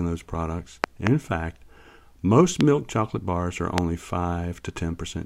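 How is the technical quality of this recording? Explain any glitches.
The recording is marred by three loud pop events, likely caused by sudden voltage steps from a plug, switch, static discharge or driver glitch. Each pulse is shaped by the downstream circuitry into a sharp transient about 20 dB above the speech. At 0.84 to 1.09 s, after "those products", a double pop lands. At 2.61 to 2.63 s, just before "chocolate bars are", comes a single crack. At 3.78 to 3.80 s, after "chocolate bars are", another follows. The speech continues beneath each one.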